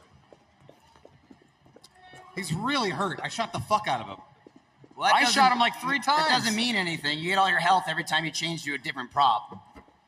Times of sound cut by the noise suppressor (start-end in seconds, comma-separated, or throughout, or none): 0.00-2.04, 4.19-4.99, 9.48-10.08